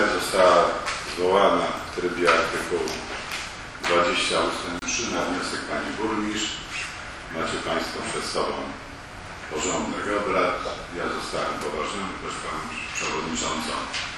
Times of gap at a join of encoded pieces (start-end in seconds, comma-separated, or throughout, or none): 4.79-4.82